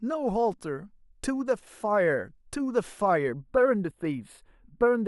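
From 3.34 s to the end, channel delay (comb filtering) sets in: one channel lags the other by only a few samples, under a tenth of a millisecond, and the mono sum cancels around 7 kHz, leaving the speech dull and hollow.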